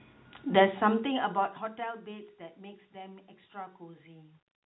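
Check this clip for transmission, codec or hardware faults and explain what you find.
No transmission, codec or hardware faults are audible in the speech, and the narrowband telephone character and gradual level moves are normal behaviour for the path.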